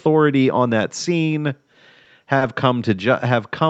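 A speech recording passed through a call path shows two short stalls from late packets, at 2.04–2.08 s and 2.38–2.43 s. Each time the jitter buffer ran dry and the receiver held the last sound for 20 ms, then 30 ms, before resuming; nothing is lost, only briefly stretched.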